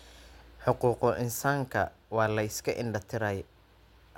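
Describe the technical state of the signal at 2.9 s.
At 2.9 s the signal is intact, with no dropout, distortion, glitch or other fault to be heard at that point in the speech.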